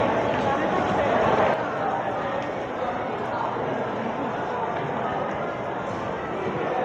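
One channel drops out at 1.54 s and stays out until the end. The sound abruptly falls by about 6 dB. The likely cause is one stereo channel going silent, so after the mono sum only half the shared signal remains.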